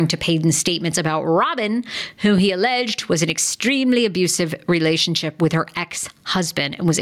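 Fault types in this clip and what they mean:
Gain pumping: Throughout the speech, the level is pulled down as soon as each loud sound arrives. The level swing is large, roughly 15 dB, and loud and quiet passages sit unnaturally close together, giving a squashed, flattened delivery. The likely cause is input gain set far too hot for the microphone, with a fast limiter or compressor repeatedly clamping it down.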